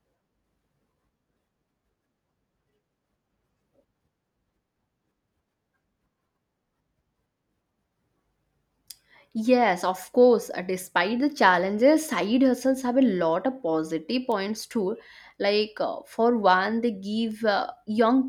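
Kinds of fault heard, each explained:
Bit error spike: a single bit flipped somewhere in memory or on a digital link, throwing one or two sample values off by a power of two before they snap straight back. The result is a sharp, broadband tick that has nothing to do with the speech around it. One tick, at about -18 dBFS, lands at 14.32 s just after "lot of positive", consistent with one corrupted sample. A fainter one, at about -30 dBFS, follows at 17.31 s after "uh for one they", suggesting two adjacent samples.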